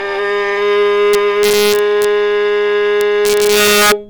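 Integer overflow from 1.14 to 2.05 s and again from 3.01 to 3.92 s: loud peaks, pushed about 1 dB and then about 4 dB past the integer limit, wrap to the opposite extreme instead of being limited, giving harsh, violent cracks far sharper than clipping.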